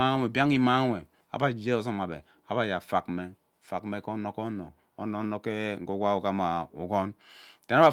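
Nothing in this recording trips any alarm: no dropouts, glitches or other technical faults turn up anywhere along the way.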